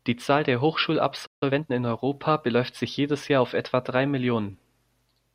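A playback stall at 1.26 s cuts the speech off mid-flow, leaving about 150 ms of silence until 1.43 s. The likely cause is the player running short of data, or its output thread being blocked, so nothing reached the output for that interval. When sound returns, the break comes across as an abrupt hole in the speech.

Time-compressed catch-up follows immediately, from 1.43 to 1.73 s. Having fallen behind, the player trims its backlog by removing small slices of audio and cross-fading across the joins, running the speech at about 1.5 times normal speed. Pitch stays where it should, but that stretch sounds hurried before the pace settles back to normal.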